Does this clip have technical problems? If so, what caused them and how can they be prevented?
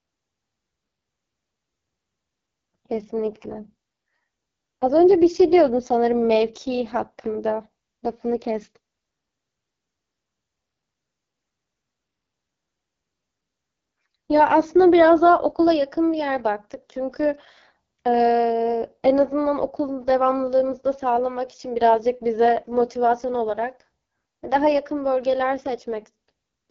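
Yes. Throughout, the speech passes through the AMR wideband (HD Voice) codec at its lowest mode, likely about 6.6 kbit/s, leaving it rough, raspy and empty above 7.2 kHz. Prevent this by using 12.65 kbit/s or higher.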